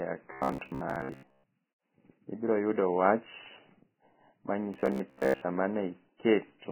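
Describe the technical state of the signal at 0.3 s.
Right at this point the sound turns into a rigid, metallic buzz at 66.7 Hz, running from 0.33 to 1.44 s. This is robotic sound from repeated short buffers, likely a ~15 ms buffer replayed while most of the real audio is skipped.

Underneath, the speech is heavily hissy and grainy, with roughened tones and smeared attacks. That points to Vorbis compression at a very low rate, around 10 kbps, where the treble is quantised so coarsely that detail turns into noise.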